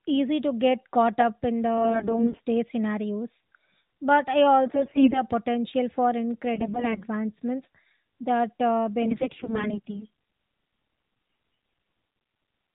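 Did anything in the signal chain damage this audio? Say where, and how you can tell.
Yes, in the network stage. In five bursts, at 1.78 to 2.40 s, 4.66 to 5.23 s, 6.54 to 7.03 s, 9.02 to 10.05 s and 11.26 to 11.82 s, the speech turns hoarse, scratchy and gargly while its pitch and level hold. These are AMR bit errors: the weak radio link flipped roughly 15 to 20 percent of the less protected bits in the narrowband AMR stream, whose 4 kHz ceiling is audible throughout. The checksum on the critical bits still passed, so the decoder rebuilt each corrupted 20 ms frame with misplaced excitation pulses and skewed gain and spectral values.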